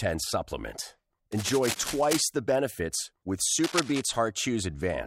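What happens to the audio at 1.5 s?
At 1.5 s there's cable scratch noise, from 1.32 to 2.21 s: scratchy rustling just under the speech level, likely a worn connector's contact resistance jumping around as it's moved.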